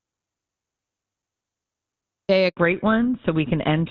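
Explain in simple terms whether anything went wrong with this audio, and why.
Audio dropout to silence, from the very start until 2.29 s: complete silence with no background at all, likely because the input was lost while the recorder kept writing silence.

Handover gap, 2.49 to 2.57 s: the voice briefly vanishes for 80 ms while the phone switches networks and no speech gets through during the changeover.

Fallback to narrowband, from 2.57 s to the end: after clear HD Voice, the call drops to an older phone codec, so everything above 4 kHz disappears and the voice sounds duller and rougher.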